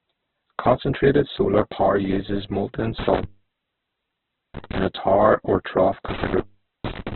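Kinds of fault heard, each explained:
Opus compression: Throughout, the speech is heavily damaged and narrowband, with nothing above 4.2 kHz and a rough, grainy texture. This is likely Opus compression at a very low rate, around 8 kbps in its music mode, filling starved bands with folded or noisy energy.
Intermittent contact: From 2.99 to 4.78 s, after "solar power uses molten", and from 6.08 to 7.15 s, after "a tower or trough", a loose connection briefly opens, dropping the sound for about 1.31 s and 0.45 s, with crackle at the break edges.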